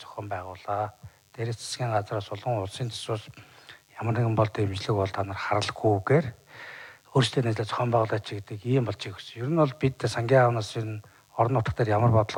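DECT cordless phone buzz runs through the whole clip, a thin, steady buzz sitting roughly 40 dB below the main sound. A nearby DECT handset or base fires a radio burst every 10 ms, and the audio circuitry rectifies it into a 100 Hz tone rich in harmonics.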